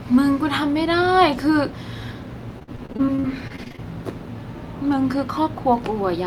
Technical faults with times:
2.59-3.80 repeated packet loss (robotic sound)

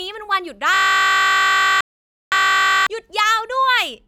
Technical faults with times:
0.74-2.87 system hang loop
1.81-2.32 digital broadcast dropout

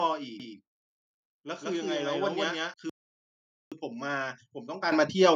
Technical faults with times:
2.89-3.72 playback stall
3.72-5.36 time-compressed catch-up
4.92 microphone volume stepped up

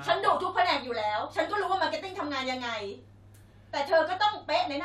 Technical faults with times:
none

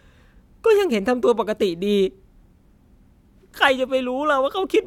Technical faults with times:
none

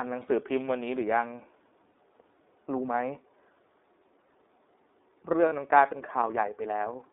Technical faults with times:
0.00-7.12 iLBC codec
1.92-1.95 lost iLBC frames
5.49-5.53 lost iLBC frames

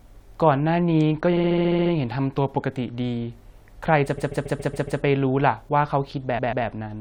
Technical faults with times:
1.01 bit error spike
1.36-1.92 repeated frames
4.17-5.00 repeated frames
6.37-6.65 repeated frames

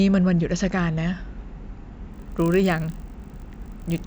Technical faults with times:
2.12-4.06 resampler restarted on every block

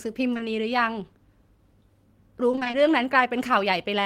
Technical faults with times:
0.33-0.41 short concealed packet loss
2.51-2.75 repeated packet loss (robotic sound)

